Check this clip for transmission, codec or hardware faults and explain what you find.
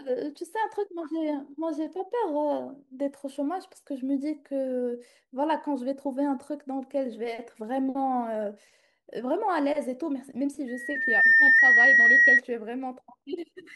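Two faults are present, both near the end of the speech.

From 10.67 to 12.41 s there is loudspeaker feedback squeal: the microphone picks up its own loudspeaker, and the loop gain exceeds unity at 1.9 kHz. That tone swells over about half a second to around 15 dB above the speech and holds as a piercing whistle.

From 10.96 to 11.59 s, overlapping the squeal, the audio runs 5.31% slow and drops 94 cents, nearly a semitone. This is likely a drift correction step, where clock-matching software changed the playback rate in one jump to manage its buffer.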